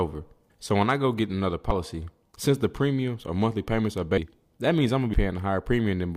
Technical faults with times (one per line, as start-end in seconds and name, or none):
1.71 damaged data in a compressed stream
4.17 damaged data in a compressed stream
5.13-5.17 damaged data in a compressed stream